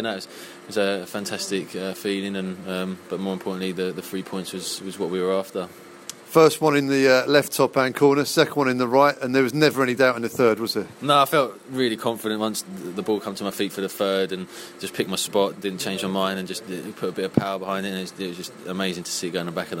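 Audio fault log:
No fault is heard anywhere in this audio.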